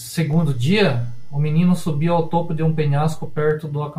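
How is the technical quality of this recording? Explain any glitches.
The recording has a fault: a DC step. At 0.33 s the waveform's zero line jumps to an offset of about -26 dBFS, as when a converter recalibrates or an input carrying an offset is switched into the path. The offset holds until 3.51 s, when the baseline returns. Each of those two jumps is heard as a short low thump or click, while the speech itself carries on unchanged through the offset stretch.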